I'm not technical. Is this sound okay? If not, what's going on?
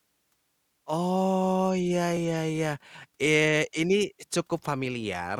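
Yes, nothing in the recording points to a technical problem with the audio signal itself.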